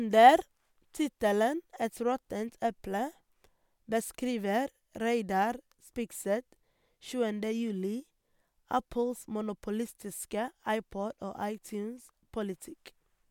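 Listening to the speech recording, nothing stood out as a technical problem at any point.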